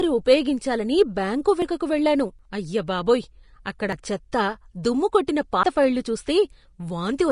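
Speech throughout, with hissy, grainy treble and a lowered cut-off. This is likely Vorbis compression at a low rate, which fits roughly 35 kbps. Sudden jumps forward occur at 1.62, 2.39, 3.93 and 5.63 s. About a tenth of a second is skipped each time, nearer 150 ms at 2.39 s, which points to a likely dropped buffer (overrun). At 5.27 s, a short hiss smears in about 11 ms ahead of a sharp attack. That is pre-echo, where the codec spreads block noise before the loud onset.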